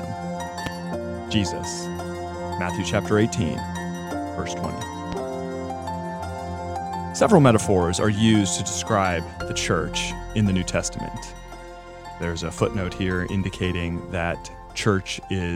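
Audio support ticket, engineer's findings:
Loud pop, 0.66 to 0.69 s: single sharp pop sitting well above the sound, about 15 dB over it, sound continuing unbroken beneath. Loud pop, 5.12 to 5.15 s: same short single pop, smaller, about 10 dB over. Both about 28 ms. Likely cause: a transient voltage step from a connector, switch, static discharge or driver glitch entering the chain, then shaped by downstream stages into a brief pulse added to the signal.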